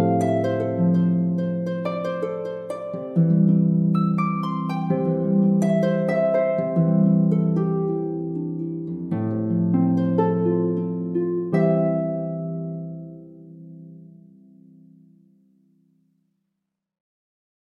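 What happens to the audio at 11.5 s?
A stream segment skipped at 11.52 s: the sound jumps abruptly forward, with a small blip at the join, as if a stretch of the programme had been cut out. The likely cause is one chunk of a segmented stream failing to load, so the player went straight on to the next one. Whatever that missing chunk held, probably a second or more, never plays, and the audio resumes further along without any pause or fade.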